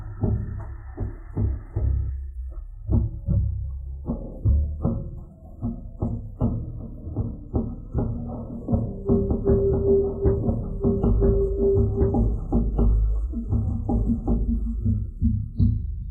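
From 9.16 s to 15.26 s, a doubled audio track appears. A second full copy trails about two seconds behind at roughly equal level, likely from a slower capture path. It starts and stops abruptly.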